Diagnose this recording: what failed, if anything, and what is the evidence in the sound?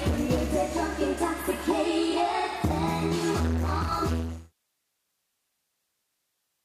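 Nothing failed in this recording, and the sound carries no evidence of any fault.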